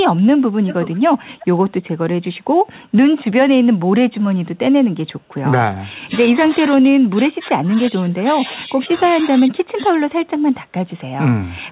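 Between 0.66 and 1.01 s, and again from 1.39 to 1.59 s, a faint delayed copy of the speech trails the original by about 367 ms. It is an echo leak, likely from a far end on loudspeaker whose echo canceller let part of its microphone pickup return down the line. The first stretch sits about 15 dB below the direct speech. The second, at about 25 dB down, is weaker still.

From 5.94 to 6.12 s, and then from 6.31 to 9.97 s, the talker's level drops sharply in pieces, by as much as roughly 25 dB, for about 3.2 seconds in total. This is speech suppressed in double talk. Both sides were likely speaking at once, and the echo canceller, unable to tell local speech from loudspeaker echo, attenuated everything. The speech dips and gaps out repeatedly. Throughout, the band stops at 4 kHz, which fits a 64 kbps G.711 mu-law call path.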